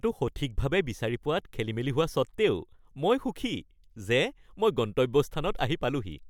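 Nothing technical stands out in this speech recording, so there's really no fault here to point at.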